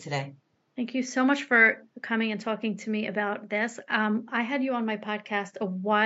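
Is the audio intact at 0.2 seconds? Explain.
Yes, the speech is intact at 0.2 seconds, with only the room's own background noise sitting well underneath it, about 47 dB below the speech.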